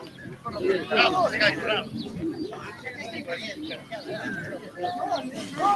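A noise suppressor meant for speech was left running on the sound throughout. It treats steady tones, ambience and decay as noise and pulls them down by as much as about 15 dB, so attacks come through while sustains sink, giving a pumping, thinning character.

Sound cut by the noise suppressor appears from 0.0 to 0.45 s, about 9 dB down, then at 3.77 to 3.92 s and 4.58 to 4.78 s, each about 8 dB down. These passages dip in level.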